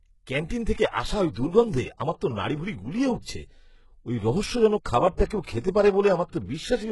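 Throughout the speech, treble is cut off above 11.5 kHz and sibilants sound gritty and metallic, likely HE-AAC compression at a very low bitrate near 12 kbps rebuilding the highs by band replication. Pre-echo appears at 0.49 s before "থেকে আসা ওই দুর্গন্ধে" and at 5.26–5.30 s after "ওই রহস্যজনক খাবারটা": block-spread quantisation noise puts a brief hiss ahead of each attack.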